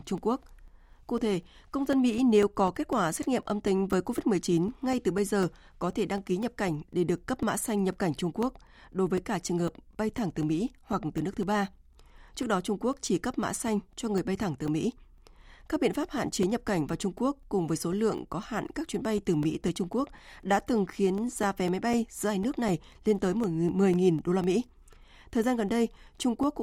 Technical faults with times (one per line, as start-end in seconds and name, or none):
0.18-26.43 periodic USB or driver dropouts